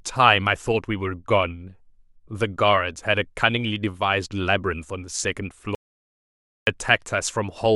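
An audio dropout to silence runs from 5.75 to 6.67 s: the speech cuts off into silence for 0.92 s, likely from a lost input.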